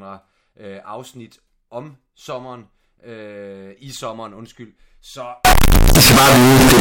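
From 5.45 s to the end, the speech turns into loud, harsh distortion, and quiet moments come out as loud as the rest. This points to signed and unsigned mixed up, likely 16-bit samples read with the top bit flipped. Unlike clipping, the level doesn't track the input; every zero crossing jumps full-scale.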